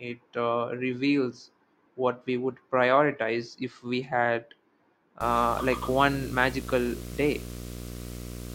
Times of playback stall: none

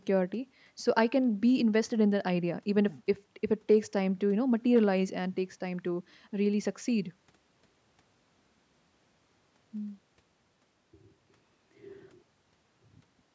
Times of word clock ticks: none

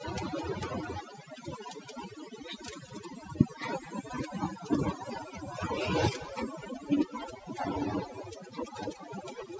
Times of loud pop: none

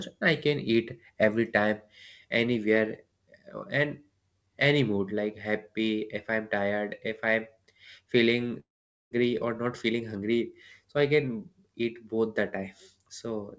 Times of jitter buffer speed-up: 9.23-10.51

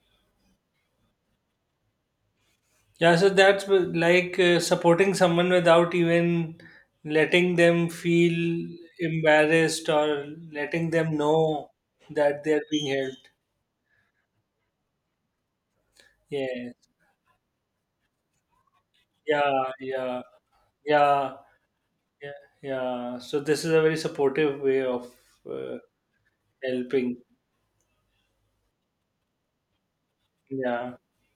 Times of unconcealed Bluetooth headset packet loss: none

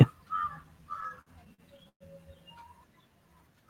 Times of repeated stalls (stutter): 0.89-2.02

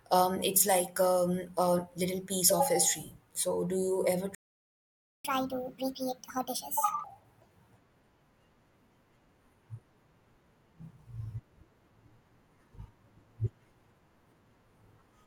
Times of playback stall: 4.35-5.25

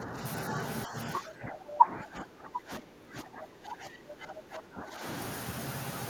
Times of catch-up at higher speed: none

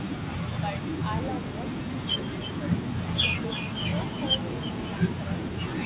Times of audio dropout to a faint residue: none

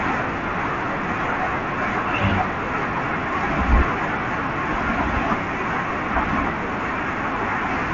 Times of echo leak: none

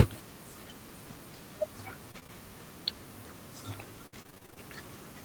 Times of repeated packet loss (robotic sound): 2.11-2.30, 4.06-4.58

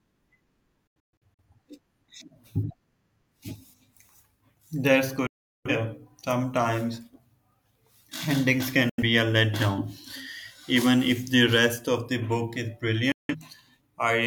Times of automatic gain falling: none

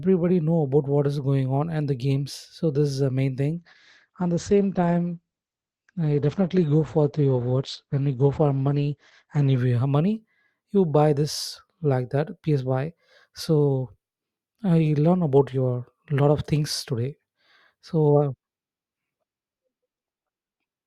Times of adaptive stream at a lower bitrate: 3.58-9.58

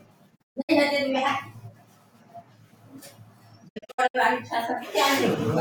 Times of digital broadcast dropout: 0.35-0.71, 3.67-4.16

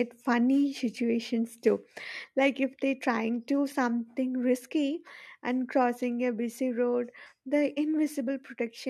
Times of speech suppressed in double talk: none

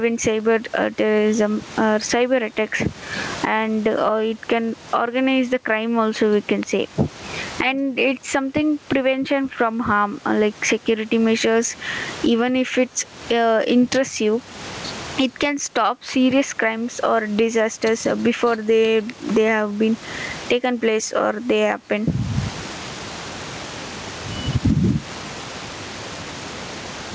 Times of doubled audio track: none

